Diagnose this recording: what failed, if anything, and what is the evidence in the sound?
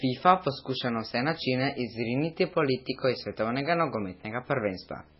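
A steady 75 Hz buzz with fizzy hash above it runs under the speech for the whole clip, sitting roughly 30 dB below it. That is video or display buzz: a monitor or video cable refreshing at 75 Hz is coupling into the analogue wiring or input stage.

The speech sounds watery and swirly throughout, with smeared consonant attacks and nothing at all above 5.6 kHz. This is likely heavy MP3 compression at a very low bitrate. The encoder cut the treble at a fixed point and dropped weak frequency lines, which flicker between frames.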